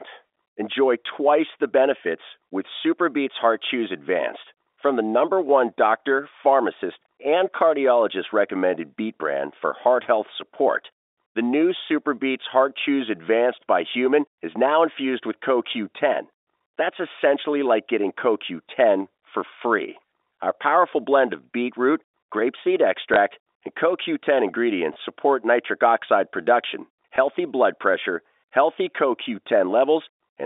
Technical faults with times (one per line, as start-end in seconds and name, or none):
23.14 packet loss with last packet repeated
24.94 packet loss with last packet repeated
27.16 packet loss with last packet repeated